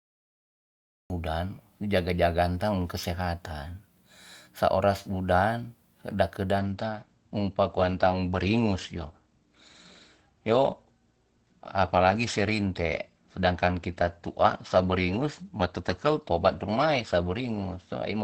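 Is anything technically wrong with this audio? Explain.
Yes, two faults are audible.

The first is a cut-off start. From 0 to 1.10 s there is digital silence, and the speech then begins abruptly mid-sound at 1.10 s, with no natural attack. The capture or stream started late, after the sound was already under way.

The second is an adaptive stream at a lower bitrate. Right after "sa oras udan da", at 6.59 s, the quality drops suddenly and without a gap, and it stays low to the end. Nothing remains above 8.7 kHz, and codec artefacts become more prominent. This fits a player switching from a 64 kbit/s Opus rendition to a 16 kbit/s one when the connection slowed.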